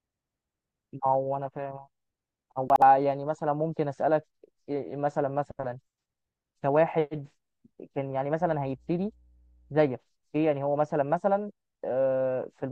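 Right around 2.7 s, between 2.7 and 2.82 s, there's a short stretch where the chunks come out of order. A 60 ms chunk of the speech turned up one chunk late, so it plays after the piece that should have followed it. Nothing goes missing, but the sequence is shuffled and you get three hard joins, which sound like a quick jumbled stutter.

Later, from about 8.40 s to 9.90 s, mains hum comes in: a steady low 60 Hz tone with a few low harmonics, sitting roughly 35 dB under the speech. That's the power line leaking into the signal path, most likely through a ground loop or a nearby transformer. It's quiet, a faint buzz underneath for that second and a half, and then it stops.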